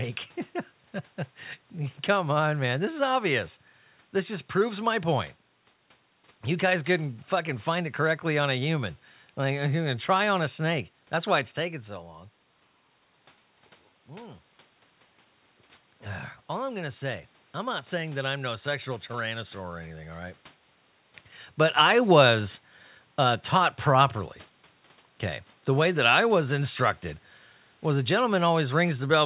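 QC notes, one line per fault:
21.77–28.62 s, automatic gain falling: the level sinks gradually by about 3 dB over nearly seven seconds, and the room noise drops along with the speech. This shows the gain control judged the input too loud, or its background noise too strong, and lowered its gain, rather than the talker backing off. On the waveform the envelope tapers steadily across the span. On a spectrogram every band, including the noise floor below the call path's 4 kHz cut-off, fades together.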